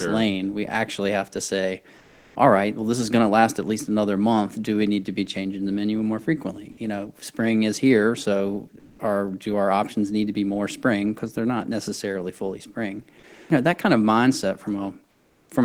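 Comfort noise in place of the background appears in three pauses: 1.97 to 2.35 s, after "actually have to say" and before "all right well this", where it is about 2 dB quieter; 8.79 to 8.99 s, after "spring is here so", about 9 dB louder; and 15.11 to 15.49 s, after "that kind of mindset", about 5 dB quieter. Each pause loses the real room tone to a flat, featureless hiss, likely because the sender stopped transmitting during silence (as with Opus discontinuous transmission) and the receiver generated substitute noise. On a spectrogram these stretches show a smooth, uniform band without the background's fine texture, and the waveform shows an even noise floor at a stepped level.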